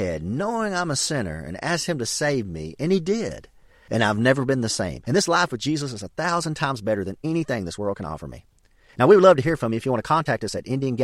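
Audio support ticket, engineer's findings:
Time-stretched section, 4.71 s to end: pace jumps abruptly to about 1.35x while pitch stays unchanged; sped-up speech rushed. Likely cause: stretch/fit-to-length processing dropping short segments to shorten duration without shifting pitch.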